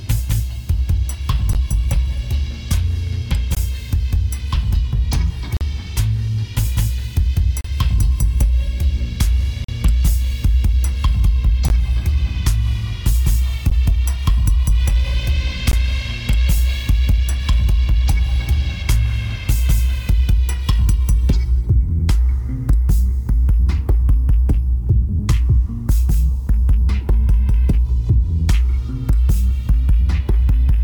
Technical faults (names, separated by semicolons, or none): gap between stream segments